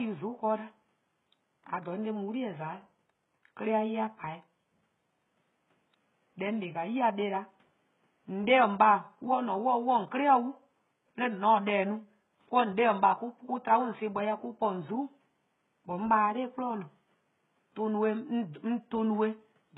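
Speech, and the whole clip has the telltale treble of HE-AAC compression, likely at a very low bitrate, something like 12 kbps. The codec keeps only the lower spectrum and fakes the top end with spectral band replication, copying lower bands upward under a coarse envelope, so the harmonics up there don't line up with the real ones below. The codec damage is heavy throughout, and the s sounds come out gritty and metallic. Room noise sits about 47 dB under the speech.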